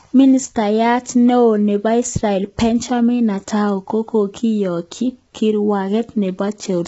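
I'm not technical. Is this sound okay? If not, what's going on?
No. Low-delay AAC compression runs through the whole clip, from start to finish. The speech sounds rough and grainy, and the top of the sound stops around 7.7 kHz, so it lacks crispness. The likely cause is the kind of fast, low-delay compression used in video calls. It chops sound into very short slices so nothing lags, and with little data to spare it can't capture the voice's tones cleanly, leaving a gritty, muffled result.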